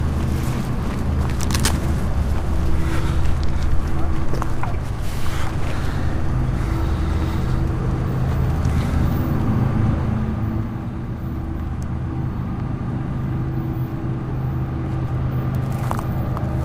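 Nothing stood out as a fault on listening to this sound recording.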